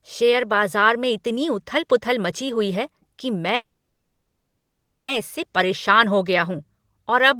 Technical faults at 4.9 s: call audio freeze

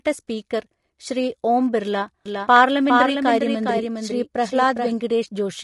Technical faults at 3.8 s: low-delay AAC compression; doubled audio track; AAC frame loss with concealment

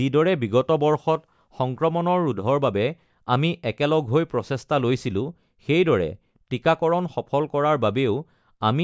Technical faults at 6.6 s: none

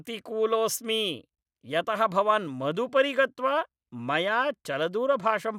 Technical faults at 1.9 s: none

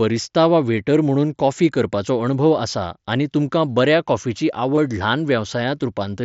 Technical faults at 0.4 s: none

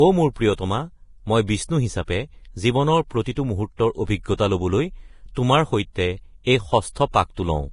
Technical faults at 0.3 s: Vorbis compression

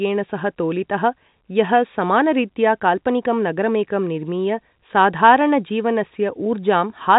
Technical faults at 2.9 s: none

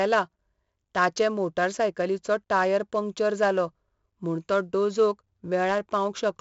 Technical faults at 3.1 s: 4-bit ADPCM compression

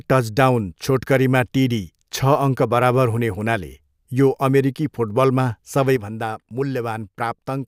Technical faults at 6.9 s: sudden gain jump

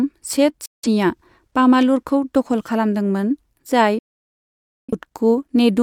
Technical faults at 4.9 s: digital broadcast dropout

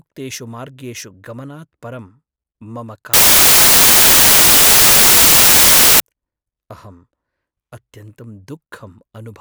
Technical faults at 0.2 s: none

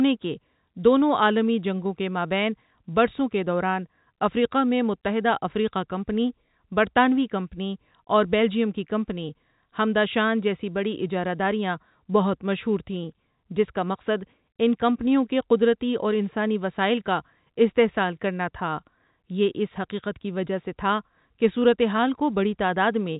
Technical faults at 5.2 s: none

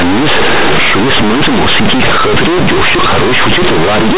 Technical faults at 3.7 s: companded audio read as linear

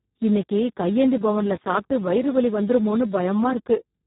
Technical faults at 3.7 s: Speex codec

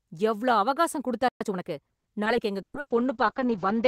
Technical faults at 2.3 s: skip ahead

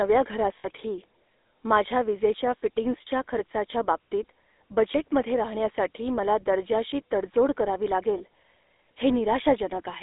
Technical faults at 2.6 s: GSM full-rate codec; lost GSM frames

